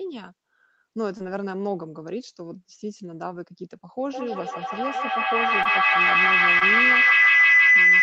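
At 1.17 to 1.21 s there is a short concealed packet loss. About 20 ms of the speech never arrived in time, and the receiver covered the gap by extending the preceding sound for roughly 17 ms before crossfading back into the real signal. It is heard as a brief smear or wobble, the kind of glitch that can swallow a short consonant.

From 4.09 s to the end of the clip a feedback howl builds. Two devices in the same room are on the call, so the microphone picks up the loudspeaker and the loop gains level on every pass. The repeats narrow to a tone around 2 kHz, recurring roughly every 150 ms, which reflects the loop delay. At its loudest the tone reaches about 13 dB above the speech. The loop is never broken, so the howl persists to the end.

Two further short concealed packet losses fall inside the howl, at 5.63 to 5.67 s and 6.59 to 6.63 s. Each replaces about 20 ms of missing audio with roughly 19 ms of concealment, producing the same brief smear. 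The band limit near 8 kHz fits the Opus call path at a low bitrate.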